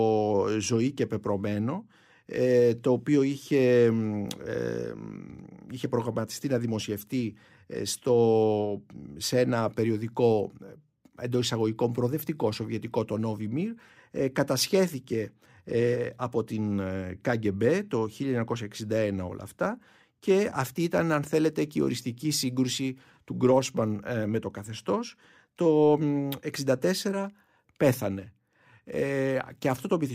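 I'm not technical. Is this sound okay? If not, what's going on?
Yes, nothing wrong turns up anywhere in this speech recording, so there's nothing to fix.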